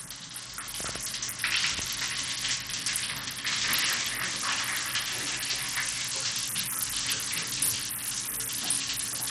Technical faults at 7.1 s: Bluetooth SBC compression

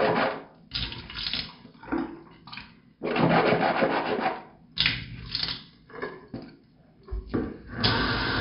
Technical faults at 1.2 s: none

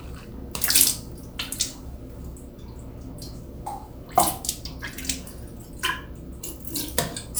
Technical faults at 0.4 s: none

